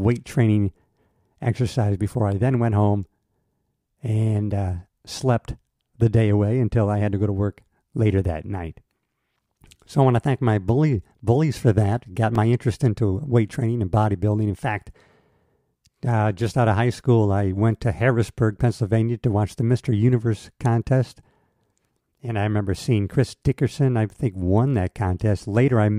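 At 12.35 s, just before "interest into", a sharp tick cuts into the speech. It is a block of digital silence: about 2.8 ms of samples dropped to silence, with the sound switching off and back on abruptly.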